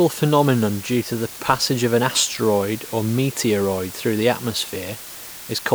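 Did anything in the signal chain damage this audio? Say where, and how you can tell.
Yes. The damage sits at sample-format conversion: low bit depth with dither throughout the speech, reduced to 6 bits. Dither before rounding turns the quantisation error into a steady, even hiss around 15 dB below the speech, with no distortion on the signal.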